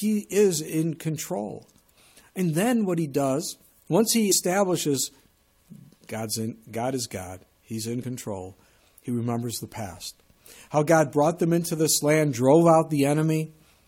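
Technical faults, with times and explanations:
4.31 s and 8.02 s, compressed frames skipped: the audio jumps ahead roughly 70 ms, then about 50 ms, as a few 23.2 ms frames go missing.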